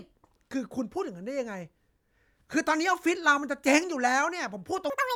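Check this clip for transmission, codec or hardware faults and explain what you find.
One fault appears, at the very end. From 4.90 s to 5.15 s the audio is read two samples at a time, giving double speed. The reader treats each pair of samples as one frame. The speech runs twice as fast and an octave higher.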